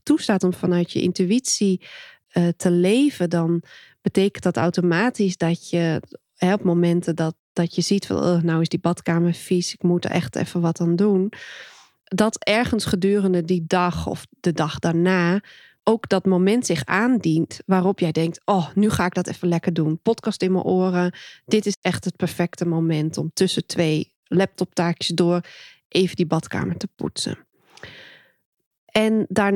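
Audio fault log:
21.74–21.84 s, Bluetooth dropout. The speech cuts out and returns about 0.1 s later. When the sound comes back, it has skipped ahead rather than picking up where it stopped. About 87 ms of audio is simply missing. This is likely a wireless link failing to deliver packets to the headphones in time. A gap this long fits a handful of lost packets in a row.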